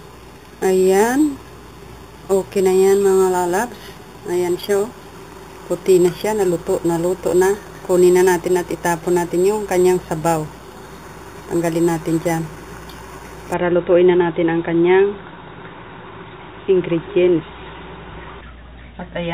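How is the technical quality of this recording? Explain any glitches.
The recording has one clear fault in its first part. From the start to about 13.54 s there is imaging from sample-and-hold upsampling. The audio appears to have been raised from a low rate, consistent with an original 8 kHz rate, by repeating each sample without a smoothing filter. The held steps create mirrored copies of the spectrum, the first filling roughly 4 to 8 kHz at about 19 dB below the signal. That is heard as a bright metallic fizz. Unlike steady hiss, the fizz rises and falls with the sound, and its lowest band moves opposite to the pitch.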